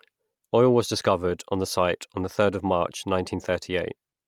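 Throughout, the speech has a breathy, grainy top end, likely from Bluetooth LC3 compression near 48 kbps. A spectrogram shows patchy upper bands refilled with noise.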